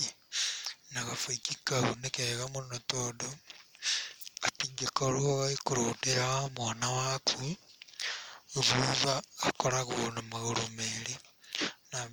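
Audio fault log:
Throughout: Bluetooth LC3 compression. The speech carries plainly audible transform-codec artefacts, with content extending to about 20.2 kHz. The damage is likely from an LE Audio link coding in 10 ms frames, and its degree fits a bitrate around 48 kbps.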